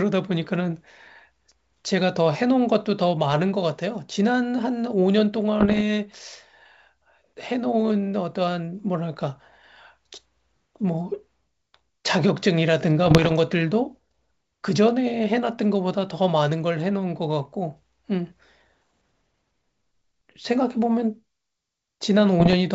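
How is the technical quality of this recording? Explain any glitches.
Three short bursts of damage interrupt speech carried over G.722 wideband telephone coding, which itself adds only faint artefacts, consistent with its full 64 kbit/s mode.

Bit errors on an ADPCM link strike at 5.60–5.82 s, 13.06–13.32 s and 22.40–22.54 s, at a rate of around one flipped bit in a hundred for the first two and about 0.7 in a hundred for the last. Each flip knocks the decoder's step size and predictor off track, so the error rings on briefly. The result is pops and rough bursts with momentary jumps in level.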